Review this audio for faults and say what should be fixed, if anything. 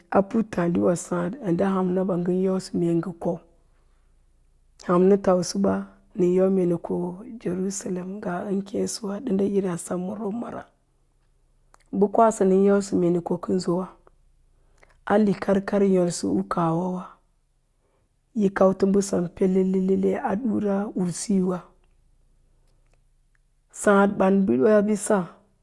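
No faults found; nothing here needs fixing.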